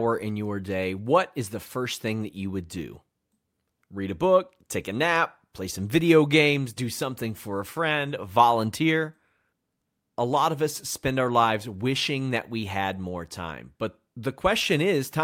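No technical faults can be heard anywhere in the speech recording; the signal holds steady and continuous throughout.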